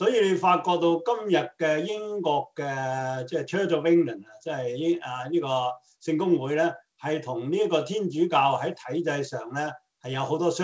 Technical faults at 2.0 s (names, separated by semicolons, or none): none